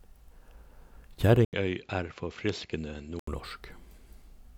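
At 1.45 s the speech drops out for 80 ms, then returns about 5 dB quieter and duller, with nothing above 7.6 kHz and faint new background noise, until 3.27 s. The gap and changed noise, not just lost treble, mark the input likely switching to a poorer device.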